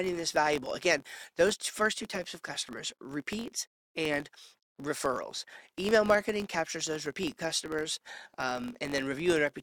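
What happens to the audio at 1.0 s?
At 1.0 s the speech carries a buzz near 46.9 Hz, the sign of a filter restarted on every block. It runs through the whole clip, not just this moment. The filter drops its memory at each block boundary and starts again from silence, leaving a small transient every block. The rate fits a 1024-sample block. Unlike mains hum, this buzz rises and falls with the speech level, and unlike dropouts, nothing goes missing.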